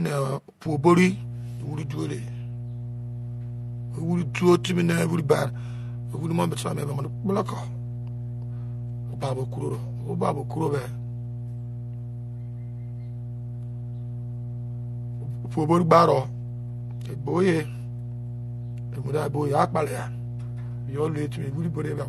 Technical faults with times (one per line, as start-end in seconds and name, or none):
0.00-22.09 transcoding between lossy codecs
0.65-22.09 mains hum